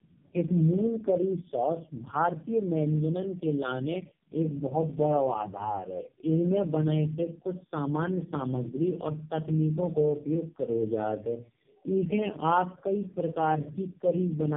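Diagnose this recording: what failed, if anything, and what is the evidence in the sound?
The speech sounds rough, muffled and warbly from start to finish, with nothing above 3.5 kHz, which is the codec stage at fault: tandem speech coding. The grain and swirl go beyond what a single narrowband coder leaves, pointing to roughly three AMR-NB passes at low rates, joined by G.711 links. At each border the call was decoded and coded again, so every coder worked on the last one's degraded output and the artefacts stacked.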